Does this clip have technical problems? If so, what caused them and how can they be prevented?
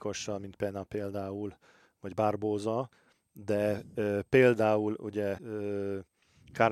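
Yes. Right after "de például ugye", from 5.37 to 5.40 s, the speech jumps ahead with a brief garbled glitch. Its roughly 28 ms length fits one MP3 frame of about 26 ms. The likely cause is a broken MP3 bit reservoir: frames were dropped, so the next frame reached back for borrowed data and decoded bytes belonging to a different frame. To prevent it, cut or stream MP3 only at points that keep the reservoir intact, or use a codec without inter-frame borrowing.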